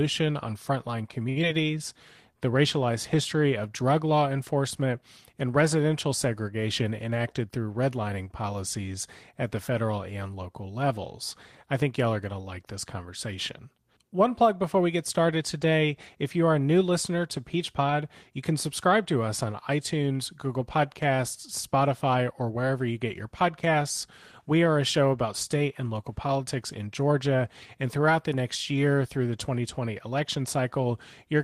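Right at the start, from 1.29 to 1.38 s, there's a short stall from a late packet. The jitter buffer ran dry, so the receiver held the last bit of speech for 68 ms until the data turned up, then carried on. Nothing's lost, but the sound hangs a touch too long, and the delay grows by 68 ms.

Just after, around 1.42 to 1.45 s, comes a short concealed packet loss. About 40 ms of audio never made it, and only 6 ms got patched with continued sound before it jumped ahead, pulling the delay back down by roughly 30 ms. You hear a quick smear or wobble there.

Later, from 22.07 to 22.65 s, there's a jitter buffer speed-up. The buffer had more in it than it wanted, so the receiver kept trimming tiny pitch-period slices, around 50 ms in total. The speech runs at about 109% speed with the pitch unchanged, so it sounds a little rushed.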